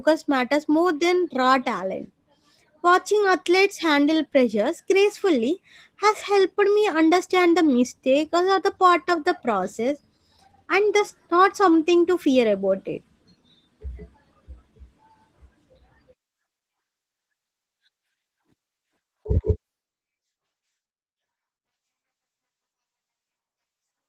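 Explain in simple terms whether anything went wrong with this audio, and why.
Yes, the speech carries plainly audible Opus voice compression from start to finish. A speech coder squeezed it into very little data, modelling the lower band and coding the treble separately. The full frequency range survives, but voices take on a rough, slightly robotic edge.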